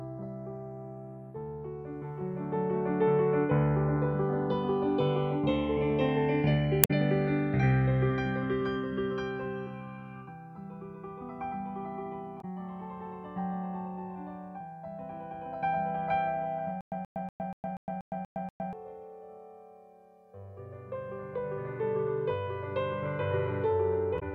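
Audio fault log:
throughout, channels drifting apart: The two channels run on clocks that disagree by roughly a hundred parts per million, so their offset creeps up to around 2 ms by the end. Folded to mono, comb notches glide slowly through the spectrum, giving a slow, steadily moving flanging.
6.81 to 6.91 s, 12.38 to 12.45 s and 24.16 to 24.23 s, damaged data in a compressed stream: Corrupted bytes in the coded stream made the decoder misread frames and hunt for the next valid header. Each spot comes out as a brief chirp, squawk, click or short hole.
16.81 to 18.73 s, stutter with silent gaps: Playback likely stalled and retried, replaying its last fragment each time before running dry. A 129 ms burst repeats eight times at a 240 ms period, separated by 111 ms of digital silence, and the audio meant for that stretch is lost.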